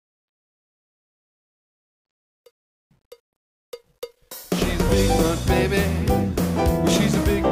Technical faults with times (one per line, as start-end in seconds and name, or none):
0.00-4.51 truncation distortion on a fade